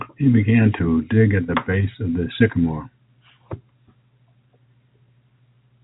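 Speech over G.711 telephone coding, band-limited below 4 kHz with at most a faint level-tracking quantisation noise, and no fault present.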